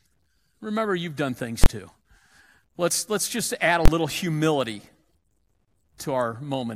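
Right after "you've done things", at 1.64 to 1.66 s, and again after "let's just add a", at 3.85 to 3.88 s, there's invalid numbers at full scale. A bad calculation pinned each 23 ms block, which fits a 1024-sample block, at one extreme value, so each lands as one sharp bang.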